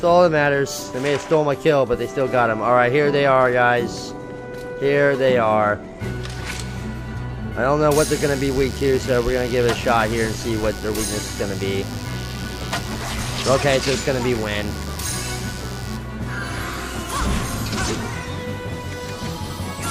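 From 7.96 s to 15.96 s, the chain picks up interference from the 50 Hz mains supply. Something like a dimmer, a rectifier or an unshielded run is letting sharp switching spikes in twice per cycle, and their harmonics climb well into the kilohertz range. The result is mains buzz: a steady, raspy drone sitting roughly 20 dB under the wanted sound. It holds for eight seconds and then stops.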